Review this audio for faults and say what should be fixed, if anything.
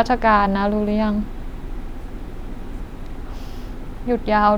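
No faults found; nothing needs fixing here.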